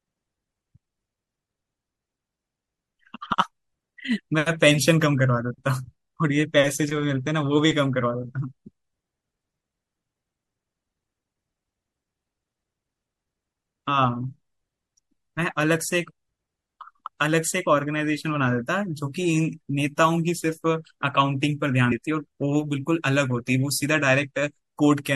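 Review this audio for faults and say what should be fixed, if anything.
Throughout the speech, the sound is watery and swirly, with metallic chirps on s sounds, likely from MP3 compression at a low bitrate, around 64 kbps. On a spectrogram faint detail flickers as patchy holes between frames. To prevent it, keep the original recording, or encode from it at a higher bitrate or in a lossless format.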